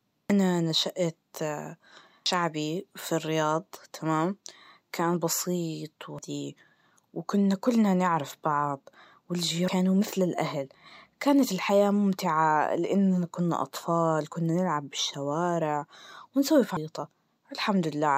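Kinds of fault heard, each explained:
Damaged data in a compressed stream: at 0.30, 2.26, 6.19, 9.68 and 16.77 s the speech breaks into a brief glitch, as corrupted bytes make the decoder misread frames, lose sync and resynchronise at the next valid frame header.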